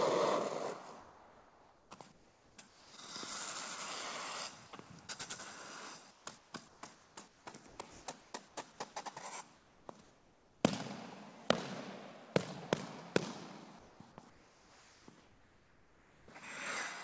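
From 1.01 to 2.93 s, 6.11 to 8.57 s, 9.56 to 10.64 s and 14.30 to 16.28 s, the real background is swapped for steady, featureless hiss. This is comfort noise in place of the background, likely from discontinuous transmission. Sound dropped by the voice detector occurs at 2.69 to 2.93 s, 4.67 to 4.73 s, 7.91 to 8.06 s and 13.79 to 14.00 s. Brief sound gives way to that same noise, likely because quiet sound was misjudged as background. Through all of this, nothing is heard above 8 kHz, which fits a G.722 call path.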